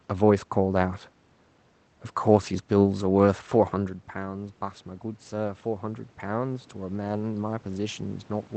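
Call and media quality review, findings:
Voice and room noise swell together from 3.72 s to end; automatic gain rising, AGC slowly restoring level after input fell about 13 dB.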